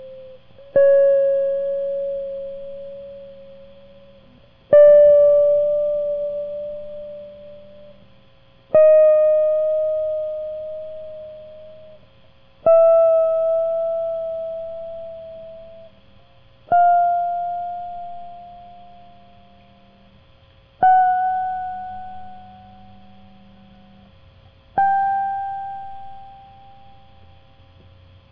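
No technical faults can be heard anywhere in the music.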